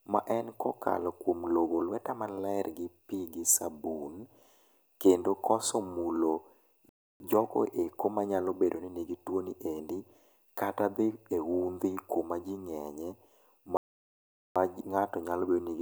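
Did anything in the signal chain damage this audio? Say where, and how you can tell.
Yes, at playback: a playback stall. The speech cuts to silence mid-flow at 6.89 to 7.20 s (0.31 s) and at 13.77 to 14.56 s (0.79 s). These are full silent gaps far longer than brief codec or network dropouts, likely from an underrun or a blocked player thread.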